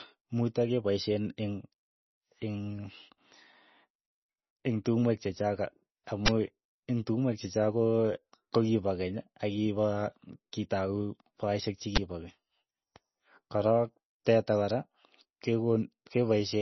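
Speech throughout, with heavy codec damage: likely low-bitrate MP3 encoding, which fits roughly 24 kbps, cuts everything above 6 kHz and leaves the audio watery and swirly. Twice, at 6.26 to 6.28 s and 11.96 to 11.98 s, an uninitialised buffer played leftover memory, producing a brief, loud burst of digital noise, which fits a 1024-sample buffer.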